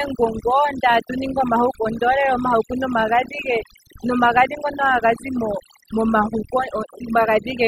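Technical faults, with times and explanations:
Throughout, overdone noise removal: the noise reduction was pushed too hard, so individual frequency bands near the noise floor are pulled down or shut off, taking quiet parts of the speech with them. The background drops and breaks up into twinkling specks. A plain low-pass or a heavy codec doesn't do this: the fault follows the noise estimate band by band and leaves gated-out silence with those warbling specks between phrases.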